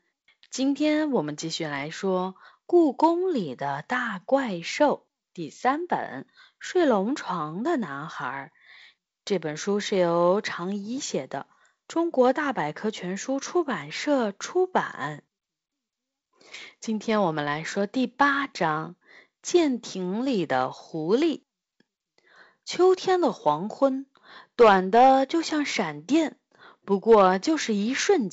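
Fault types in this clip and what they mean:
No faults: the speech runs over G.722 wideband telephone coding, band-limited with nothing above 7.7 kHz, and its slightly noisier lower band fits the 48 kbit/s mode.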